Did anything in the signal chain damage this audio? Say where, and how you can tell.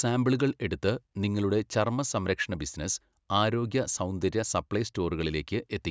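No, nothing along the chain seems to have left a mark on this speech; I can't hear any point where a stage got in the way.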